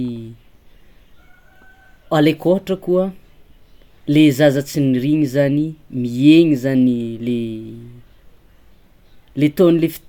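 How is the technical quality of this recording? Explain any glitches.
The recording has no glitches: the speech signal stays continuous and steady throughout, with no dropouts, level jumps or other technical faults to explain.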